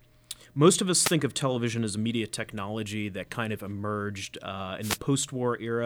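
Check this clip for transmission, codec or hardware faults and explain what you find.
Two wireless microphone noise hits occur in this speech. The first runs from 1.00 to 1.16 s, between "most of" and "of television as a", and the second from 4.81 to 4.98 s, after "kind of emerged uh". In each, the FM radio link fades as reflected signals cancel, so receiver noise rises and is heard as a brief swish of static.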